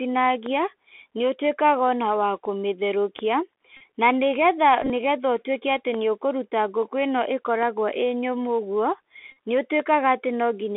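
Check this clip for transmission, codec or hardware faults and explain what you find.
Three faults are present: narrowband Bluetooth CVSD headset coding throughout, five DC steps, and three bursts of Bluetooth headset packet repetition.

Bluetooth CVSD headset codec, whole clip: the sound is confined to about 300 Hz to 3.5 kHz. A 64 kbps one-bit delta coder can't follow fast swings, so sibilants turn scratchy over granular hiss. Ordinary lowpassing would sound clean rather than gritty.

DC step at 0.46, 3.19, 5.94, 7.63 and 9.80 s: the waveform's zero line jumps and then drains away through a high-pass near 5 Hz. Each step gives a dull low thump while the speech carries on unbroken, unlike a dropout, which removes sound.

Bluetooth headset packet repeated at 3.77–3.82 s, 4.82–4.90 s and 9.32–9.37 s: lost packets are replaced by re-decoding the previous one every 3.75 ms, so each run becomes a buzz near 267 Hz. 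The losses come to about 37.5, 56 and 45 ms, consistent with runs of roughly ten to fifteen packets. The middle burst is scattered across 75 ms, with its longest run around 20 ms. The fixed 267 Hz buzz is what separates it from a codec warble.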